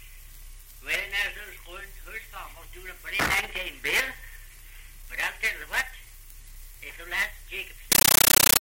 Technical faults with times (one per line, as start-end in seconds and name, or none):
7.92-8.61 compressed stream played as audio